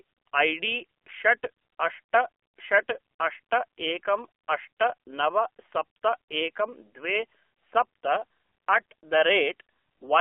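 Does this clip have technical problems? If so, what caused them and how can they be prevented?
Yes. Throughout, the speech carries AMR narrowband mobile codec damage. The band is limited to 300 Hz–3.4 kHz, and the buzzy, synthetic texture points to a low rate near 7.4 kbps, where too few excitation pulses model each frame. Prevent it by recording locally or over a wideband link rather than a narrowband phone call.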